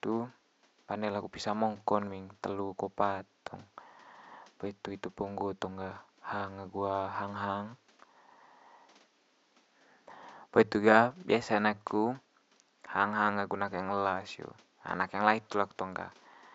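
No technical faults are audible.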